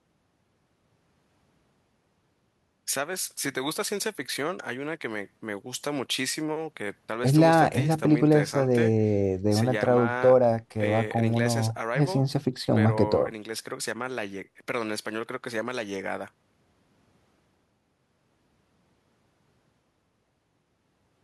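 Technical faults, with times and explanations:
No technical faults are audible anywhere in this speech recording.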